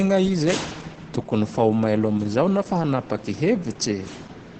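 Throughout this speech clip the voice sounds muffled, hoarse and slightly robotic, with nothing above about 8.6 kHz. This is heavy Opus voice compression. The band is cut to wideband, and the SILK linear-prediction coder is modelling the voice with a coarsely quantised excitation, which roughens and flattens the tone. The depth of the damage points to a very low bitrate, around 10 kbps.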